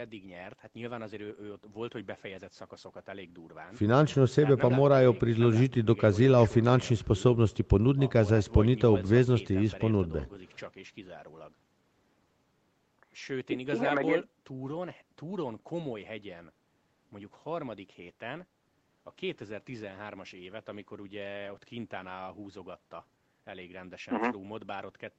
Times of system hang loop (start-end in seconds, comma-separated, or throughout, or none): none